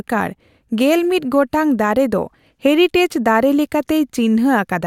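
No technical faults can be heard anywhere in the recording.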